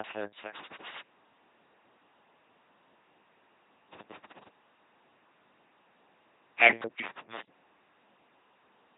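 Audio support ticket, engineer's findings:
LPC-10 vocoder, whole clip: buzzy, mechanical robot speech, some voiced sounds turning to hiss and some breathy ones to buzz. Heavy damage, nothing above 3.9 kHz. Sounds like a low-order LPC model driven by either a pulse train or noise, with every frame forced fully voiced or unvoiced. Wrong voicing calls give the buzz/hiss swaps. The coarseness points to a 2.4 kbit/s LPC-10 link somewhere in the chain.

Loose connector crackle, three bursts: 0.54 to 1.01 s, 3.93 to 4.48 s, 7.04 to 7.47 s. Irregular scratchy crackle, roughly half a second each, signal chopping in and out underneath. Probable component is a worn or dirty jack or plug making and breaking contact when it moves, with the rapid interruptions plus any DC on the line giving the pops. Reseat or swap the cable first.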